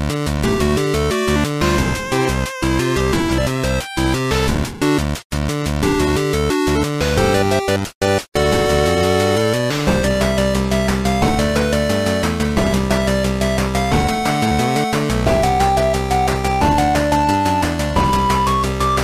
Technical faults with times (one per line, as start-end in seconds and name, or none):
none